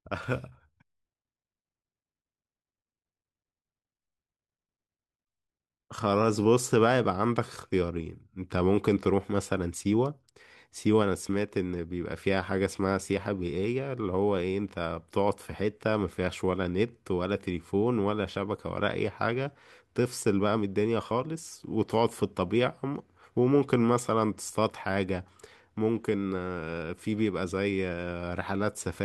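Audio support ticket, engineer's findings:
No faults found on review.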